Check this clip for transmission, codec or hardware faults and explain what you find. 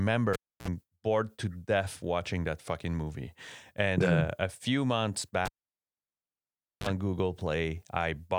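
The cable was pulled and plugged in twice. At 0.33–0.68 s, just before "bored to death watching", there's a pop and about 0.3 s of near silence, then a 55 ms burst of 60 Hz buzz as the plug tip touched before full contact, and a second pop. After "a few months", 5.45–6.87 s, it recurs with about 1.4 s of silence and a 35 ms burst of 50 Hz buzz.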